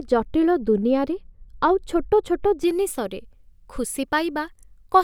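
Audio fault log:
0.00–2.64 s, de-emphasis applied wrongly: the speech sounds dull and muffled because a treble cut meant to undo pre-emphasis acts on audio that needs none, falling about 11 dB at 10 kHz. Unlike a low-pass filter, the slope is gradual, with no sharp cutoff.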